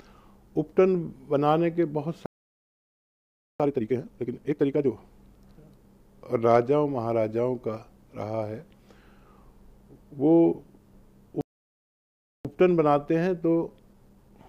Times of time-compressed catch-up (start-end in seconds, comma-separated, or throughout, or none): 3.60-4.92, 12.45-14.48